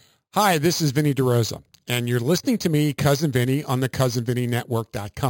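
Right from the start and all the way through, this speech carries imaging from sample-and-hold upsampling. Each sample was simply repeated with no smoothing filter, which fits an 11 kHz source raised to 48 kHz. Mirrored copies sit about 16 dB below the signal, the first between 5.5 and 11 kHz, heard as a bright metallic fizz that tracks the speech level.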